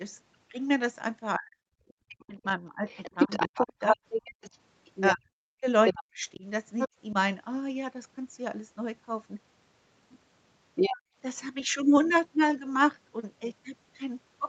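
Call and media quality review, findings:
Speech suppressed in double talk, 1.38–4.01 s and 5.13–6.44 s. Talker drops in pieces, at worst around 40 dB down. Likely echo canceller attenuating near-end speech during overlap with far end.

Other side's voice leaking through, 2.89–5.10 s, 5.86–6.04 s, 6.79–7.13 s, 10.75–10.99 s. Second voice roughly level with the talker, slightly lower at 6.79 s. Likely residual loudspeaker echo uncancelled.

Background gated by the echo canceller, 10.99–11.16 s. Room tone dips about 26 dB for a brief moment immediately after the leak, then recovers. Suppressor clamping the mic on far-end playback.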